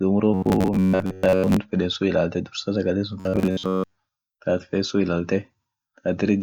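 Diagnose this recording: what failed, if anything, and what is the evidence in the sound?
Robotic sound from repeated short buffers hits the speech at 0.34–1.57 s and 3.20–4.03 s as a rigid 93.8 Hz metallic buzz. That fits a 10.7 ms block replayed at the driver or buffer stage, likely starving, skipping most real audio. Unlike codec warble, the buzz rate stays fixed.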